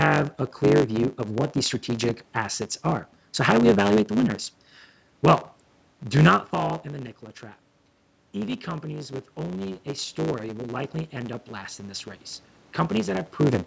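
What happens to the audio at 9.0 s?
At 9.0 s the automatic gain is rising, from 8.34 to 13.35 s. It lifts sound and room noise together by about 6 dB after the input fell about 10 dB. The waveform envelope swells steadily and the spectrogram's noise floor brightens. A block size mismatch (truncated) also runs throughout. Block ends are discarded, giving a 100 Hz buzz and 1.09x speed with the timbre kept, seen as vertical striations every 10 ms.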